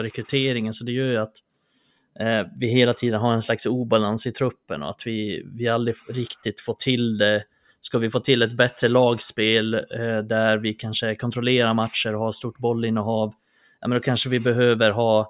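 No technical faults are audible.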